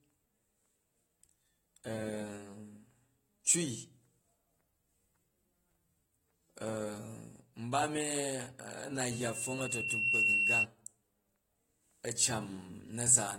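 Speech throughout, with a dull, smeared, plainly audible coding texture and nothing above 16.6 kHz, likely AAC compression at a low bitrate, something like 32 kbps. From 9.10 to 10.66 s there's a loudspeaker feedback squeal: a 2.7 kHz tone swelling over about a second to roughly 10 dB above the speech, as the mic-to-speaker loop runs away.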